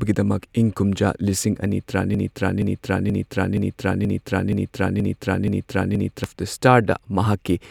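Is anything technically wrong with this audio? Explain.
Yes. From 2.15 s to 6.24 s there is a broken-record loop: the player or stream likely stalled and kept resending its last held fragment. A 0.48 s slice of speech repeats exactly nine times back to back, and the speech meant for that span is lost.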